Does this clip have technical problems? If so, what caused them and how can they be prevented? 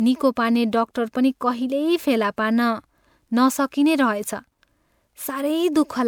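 Yes: generation loss throughout, a swirly, hollow smear with blurred attacks, likely from about three MP3 passes near 128 kbit/s, each requantising on a shifted frame grid. Prevent it by keeping a lossless master and encoding once.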